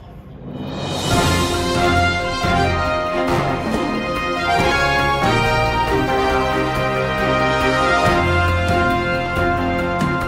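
From 4.60 s to 6.60 s a thin, steady whine of fixed pitch sits underneath the sound, built on a 1 kHz tone with its strongest component at 4 kHz, roughly 35 dB below the signal. This is USB whine: the bus draws current in regular 1 ms frames, and that pulsing leaks into the audio through the shared power or ground, leaving a tone at the frame rate and its harmonics.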